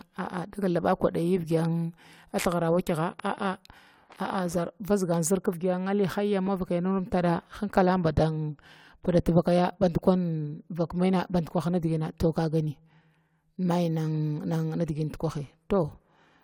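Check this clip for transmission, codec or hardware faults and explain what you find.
No faults detected in this recording.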